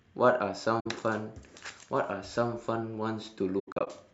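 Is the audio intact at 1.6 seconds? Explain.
Yes, the speech at 1.6 seconds is intact, with no dropout, click, distortion or other fault at that moment.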